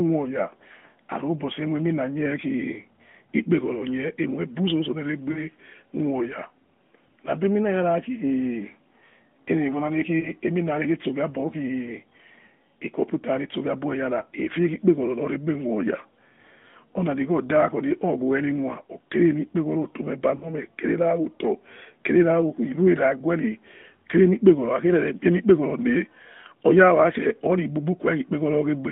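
At 5.32 to 5.39 s, 10.20 to 10.29 s and 20.36 to 20.52 s the narrowband phone audio has lost AMR speech frames. The decoder discarded corrupted frames and re-synthesised from the last good pitch and vocal-tract settings with decaying gain. The first two gaps, about 40 ms each, sound drawn out as they fade. The third, about 60 ms, smears into a drawn-out fade. Unlike a hard mute or click, these gaps stay tonal and smooth-edged.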